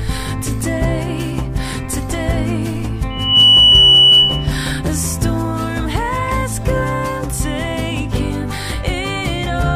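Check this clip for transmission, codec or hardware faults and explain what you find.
One fault is present: loudspeaker feedback squeal from 3.1 to 4.58 s. A microphone is picking up its own loudspeaker, and the loop gain exceeds unity near 3 kHz. That tone swells over roughly a third of a second into a steady squeal around 10 dB above the surrounding sound.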